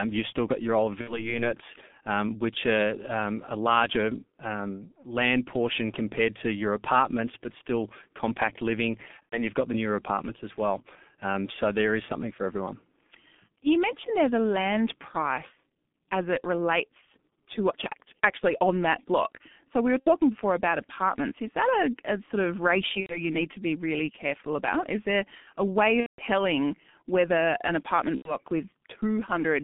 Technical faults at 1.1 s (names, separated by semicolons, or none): G.723.1 codec; VoIP packet loss concealed by the speech codec